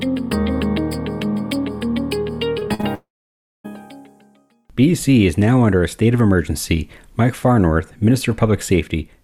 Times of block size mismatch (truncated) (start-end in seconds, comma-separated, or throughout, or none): none